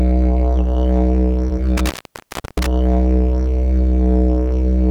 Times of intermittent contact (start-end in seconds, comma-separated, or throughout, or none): 1.77-2.67